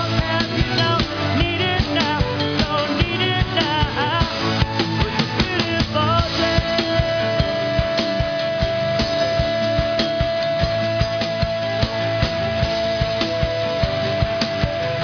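Aliasing runs through the whole clip. It sounds like the rate was dropped to about 11 kHz with no filter first, so everything above the 5.5 kHz fold mirrors back down as unrelated, fairly loud tones. The top end comes out gritty and metallic, packed right up to the band edge.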